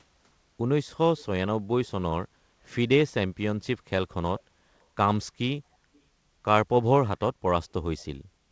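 From 5.94 to 6.00 s, a very faint echo leak: a short scrap of speech returns about 275 ms late, likely from a loudspeaker echo canceller missing residue.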